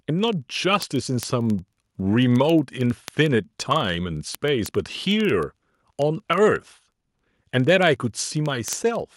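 From 0.10 s right through to 9.14 s there's a steady run of word clock ticks, about twenty a second, a couple of hundred in all. The receiving device isn't locked to the sender's clock, roughly 500 ppm off, so every slip drops or repeats a single sample and clicks.

At 7.92 s the whole speech level, background included, steps down by about 1 dB in one go. That's likely the microphone volume stepped down by the call software, which lowered the input gain.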